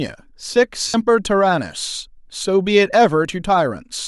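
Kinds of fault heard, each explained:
Lost LE Audio frames: at 0.88 to 0.94 s the speech breaks into a short noisy smear lasting about 60 ms, which fits six 10 ms frames going missing on the Bluetooth link. To cover the gap, the LC3 decoder repeats the last spectrum it received with randomised signs, so the sound turns rough and hissy and begins fading after the first few frames, until real audio returns.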